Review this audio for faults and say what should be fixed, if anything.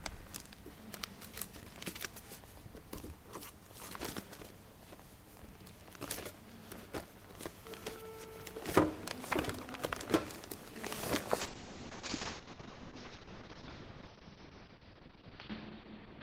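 A call bitrate drop begins at 11.4 s and lasts until the clip ends at 16 s. The bandwidth estimate fell, so the encoder coded the sound more coarsely, in a way that fits a fall from about 32 kbps to about 7 kbps. It also narrowed the audio band from 20 kHz to 4 kHz, which makes the sound muffled, and it never recovers. On a spectrogram, everything above 4 kHz vanishes abruptly at 11.4 s. Set a higher minimum bitrate and smooth the bandwidth estimation so the encoder doesn't collapse to such low rates.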